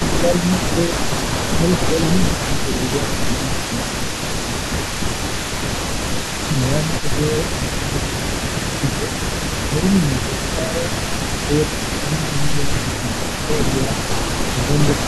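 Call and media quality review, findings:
Echo leak, 0.0 to 15.07 s throughout. A delayed copy of the speech trails the original by 339 ms, sitting roughly 15 dB under it. Likely the far end's loudspeaker path bleeding into its microphone, with the echo canceller not converging and residual echo returned to the line.

Speech suppressed in double talk, at 0.07 to 0.98, 1.54 to 4.47, 6.45 to 9.08, 9.64 to 10.93, 11.47 to 13.97 and 14.52 to 15.07 s. Level dips of around 10 dB, only about 5 dB in the 9.64 s stretch, with pieces of the talker pulled down while both sides are active. Most stretches lose somewhere between half a second and a second and a half of speech; the last loses only a brief moment. Likely the same echo canceller misjudging near-end speech as echo and attenuating everything during overlap.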